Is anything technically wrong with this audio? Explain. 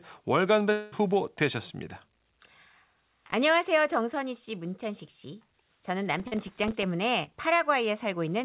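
Yes. From 0.72 to 0.95 s there is a long network dropout, most likely a burst of lost packets of about 200 ms. The receiver carries the last sound forward as a fading buzz that fills the hole with no silent gap, then resumes further on with that stretch gone. Its length separates it from the brief smears later in the clip.

Processor overload crackle appears from 2.66 to 3.33 s and from 6.14 to 6.83 s. The audio is being processed in very short buffers, around a millisecond and a half each, and dozens of them miss their deadline over each stretch. Each miss drops in a tiny hard-edged silent gap, so the result is a gritty tearing over the sound rather than one smooth fill.

Short concealed packet loss occurs at 6.28 s, inside the second crackle burst, and at 7.23 s. Each time about 40 ms never arrived, and the decoder extended the previous sound and blended back in. Each is heard as a single short smear or wobble, not a run of clicks. 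This call path through a G.711 A-law codec at 64 kbps carries nothing above 4 kHz.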